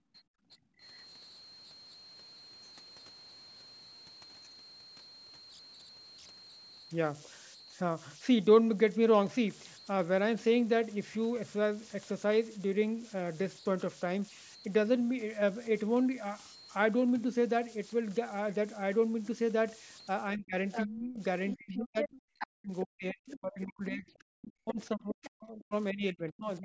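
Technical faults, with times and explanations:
Throughout: converter idle tones. A whistle sits around 4 kHz, about 21 dB below the speech. It is clearest in pauses and turns grainy under quiet passages. An undithered delta-sigma converter, given very small input, cycles through repeating bit patterns that form this tone.
0.0 to 0.8 s: background gated by the echo canceller. The room sound drops sharply at the start, by about 33 dB at its deepest, for most of that span. The echo canceller clamped the microphone hard while the loudspeaker played, then released it.
20.35 to 21.2 s and 21.55 to 26.64 s: speech suppressed in double talk. The talker's level dips, roughly 25 dB in the first span and up to 40 dB in the second, which runs to the end. Both sides likely spoke at once, so the canceller turned everything down.
20.72 to 20.87 s, 21.48 to 22.47 s, 23.31 to 23.63 s, 24.14 to 24.18 s and 24.71 to 25.27 s: other side's voice leaking through. 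A second voice appears in scraps, from fairly strong to barely audible. This is likely loudspeaker sound the echo canceller failed to remove from the microphone.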